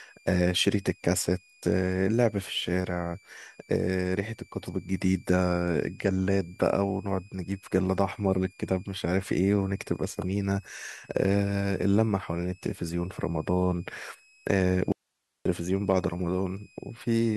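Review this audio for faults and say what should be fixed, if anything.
Switching supply whistle, throughout the speech: a high tone wandering between 2.33 and 2.59 kHz sits roughly 35 dB under the voice. A switching power supply is running in an audible burst mode as its load shifts. Keep switching supplies away from the audio chain, or filter and shield them.

Audio dropout to a faint residue, 14.92 to 15.45 s: the speech cuts out abruptly for 533 ms, leaving only hiss around 55 dB down, then returns mid-flow. The wanted signal was likely lost upstream while the later stages stayed live. Secure the connections and monitor the input path for interruptions.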